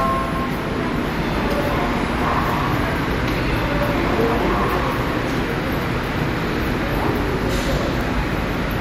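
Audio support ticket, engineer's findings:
USB whine, present throughout. Steady fixed-pitch tone at 1 kHz, its strongest component, sitting roughly 30 dB under the wanted sound. Probable cause: USB interface or cable, with 1 ms bus-frame current draw coupling into the analogue path via shared power or ground. Spectrogram: thin, unbroken horizontal line at 1 kHz across the full clip. Waveform: low-level periodic ripple under the sound.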